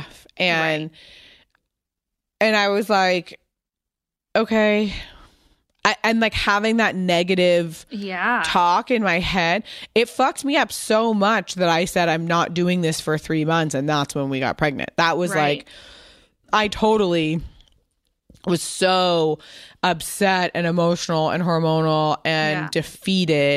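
No technical faults occur anywhere in the recording.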